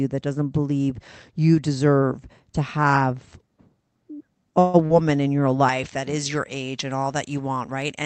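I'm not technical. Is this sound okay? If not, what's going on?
No. At 4.59 s there is a call audio freeze lasting about 0.14 s. The sound is stretched into a short fading buzz, most likely because pieces of the call arrived late and the receiving end ran out of audio. Then it resumes where it stopped, with nothing lost.

Just after, at 4.86 s, there is a short concealed packet loss. About 0.04 s of the call never arrived. The receiver filled the hole by continuing the previous sound, which leaves a brief smear or wobble, and a small sound there may be missing.

From 5.69 s to the end, pre-emphasis was left on. The treble was boosted for transmission and never turned back down, so that stretch sounds thin, harsh and overly hissy on s-sounds compared with the earlier part of the call.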